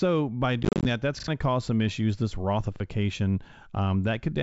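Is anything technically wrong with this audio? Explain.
Yes. From 0.63 to 0.86 s, just before "that that's", there is packet loss on an ADPCM call. About 140 ms drops to silence in short hard-edged holes, none longer than 30 ms, scattered across 220 ms. Each loss knocks the decoder's predictor and step size out of step with the sender's, so the sound comes back slightly distorted. These are silent gaps, not repeated material.

There are two repeated buffers. From 1.20 to 1.28 s, between "that that's" and "to cause some issues", a 40 ms piece plays twice more, and at 2.76–2.80 s one more time, because new audio was late. The result is a stutter with hard joins rather than silence, and about 70 ms and 40 ms of real audio are skipped. The G.722 wideband coding at 64 kbit/s keeps the band up to 7 kHz, with faint upper-band hiss at most.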